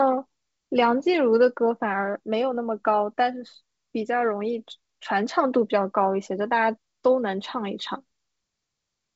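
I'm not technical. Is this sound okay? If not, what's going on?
Yes, this speech sounds fine, with nothing wrong to point out; it has the slightly trimmed top end of a good wideband phone call, where the G.722 wideband telephone coding leaves out sound above about 7.7 kHz, and that's normal for this kind of line.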